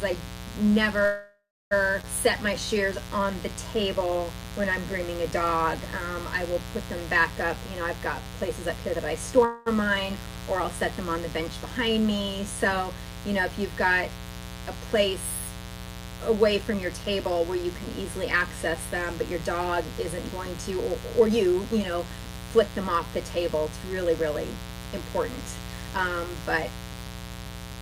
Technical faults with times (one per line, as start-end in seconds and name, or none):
0.00-27.82 mains buzz
1.05-1.73 call audio freeze
2.01-2.05 skip ahead
2.49-7.31 jitter buffer slow-down
8.26-9.44 jitter buffer speed-up
9.45-9.68 call audio freeze
16.49-27.72 jitter buffer speed-up